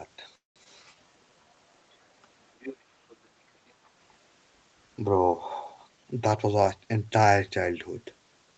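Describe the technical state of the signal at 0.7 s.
Right around 0.7 s the speech passes through a skip ahead at 0.64 to 0.67 s. About 150 ms of audio is gone and the two sides are spliced with only a brief 16 ms bridge. Unlike a dropout, there is no audible silence, just an abrupt forward jump.

Immediately after, from 0.72 to 1.56 s, a jitter buffer slow-down stretches the audio by 126 ms, to about 86% speed, as the receiver rebuilds its reserve by repeating pitch periods. Sounds drag, but unlike a tape-style slowdown the pitch stays put.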